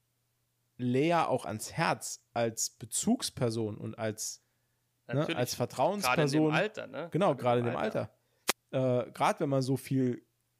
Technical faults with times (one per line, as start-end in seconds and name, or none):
8.47-8.52 wireless microphone noise hit